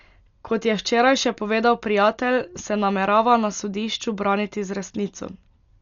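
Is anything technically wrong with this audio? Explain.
Yes. Throughout, the speech is dull with nothing above 7 kHz, and rough, fluttering noise hangs around tonal parts. This is likely heavy Dolby Digital compression at a rate that fits about 48 kbps: starved lines get dither noise, unlike a clean low-pass cut.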